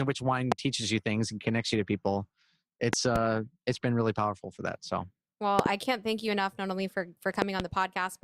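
A loud pop at 0.52–0.54 s after "which wine", a double pop at 2.93–3.18 s before "it's been really powerful", and double pops at 5.59–5.68 s before "I can't thank you" and 7.42–7.62 s. Each jumps well above the speech, likely from voltage spikes from a switch, plug or static.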